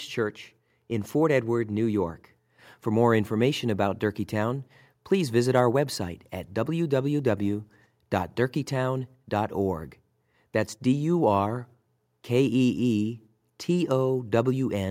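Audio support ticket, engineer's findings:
Listened through the whole speech recording and nothing stood out as a fault, so no findings to log on this one.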